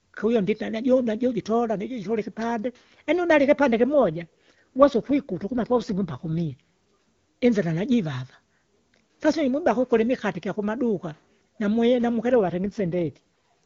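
Speech with two AMR rate drops, at 4.02 to 6.53 s and at 12.35 to 13.18 s just after "kukuli imikate ikyakumaduka namwi". The voice turns rough and synthetic, pointing to a fall from about 23.85 to 8.85 kbit/s. A spectrogram shows the same bandwidth and no gap, only smeared, grainier harmonics.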